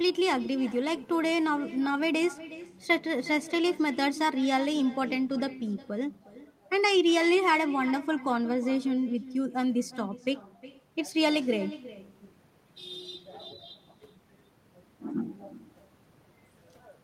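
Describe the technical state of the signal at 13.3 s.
At 13.3 s the speech is trailed by a fainter, thinner copy arriving roughly 0.4 s later, about 16 dB down. This is echo with no canceller, present throughout the clip: the far end's loudspeaker feeds its microphone, and nothing removes the returned signal.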